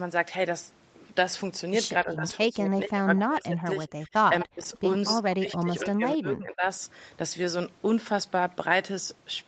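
Speech recorded over a call shows speech suppressed in double talk at 2.03–3.82, 3.99–4.13, 4.29–4.65 and 5.16–6.66 s, where the voice dips by roughly 20 to 40 dB, likely because an echo canceller ducked it while the far side talked. Echo leak appears as brief delayed copies at 4.40–4.46, 4.62–4.67 and 5.08–5.15 s, lagging by 252 ms and sitting well below the speech, likely loudspeaker echo the far end failed to cancel.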